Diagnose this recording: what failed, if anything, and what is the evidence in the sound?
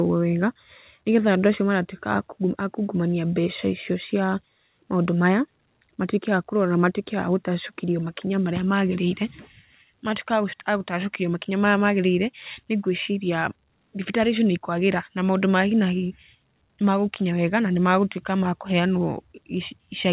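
Nothing failed: the speech came over a call link whose content stops at 4 kHz, which fits a narrowband telephone codec such as G.711 A-law at 64 kbps, and that band limit is simply how such a link behaves.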